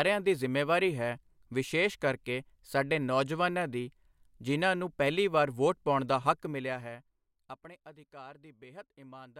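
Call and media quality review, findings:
Zipper noise, 6.26–7.85 s, right after "ਵਾਰ ਵੋਟ ਪਾਉਣ ਦਾ": ticking rides on the speech as level drops by about 20 dB. Likely cause is an unsmoothed gain stage applying 1 dB steps, about fifteen per second, each step a small click. Unlike a proper fade, which sounds continuous and click-free, this drop is audibly stepped and tick-laden.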